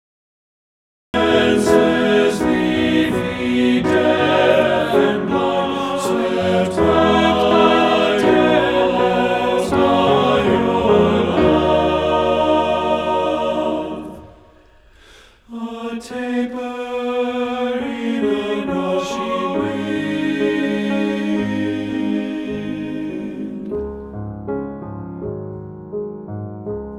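Cut-off start at 1.14 s: the capture began late, so the first 1.14 s is digital silence and the sound then enters abruptly, already mid-sound. There is no natural attack or fade-in, because the opening of that sound was never recorded.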